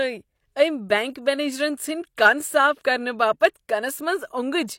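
Speech with pre-echo before three sharp attacks. A short hiss leads in at 2.17 s, from 2.82 to 2.85 s, and at 3.40 s. These lead-ins last 10 to 29 ms. The transform codec spread each block's quantisation noise into the quiet moment before the onset, which also softens the attack.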